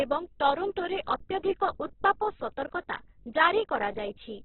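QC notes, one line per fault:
Throughout, Opus compression: nothing above 4.1 kHz, so the speech is narrowband and dull. Starved bands are filled with folded or noise energy rather than left empty, giving a rough, grainy texture with little swirl. This is likely CELT-mode Opus near 8 kbps.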